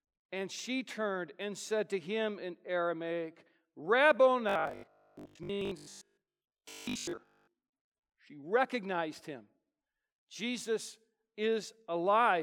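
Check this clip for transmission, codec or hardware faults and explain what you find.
One fault. From 4.49 to 7.53 s, audio likely arrived too seldom, so short chunks kept repeating: robotic sound from repeated short buffers, a rigid 50 Hz metallic buzz over the speech.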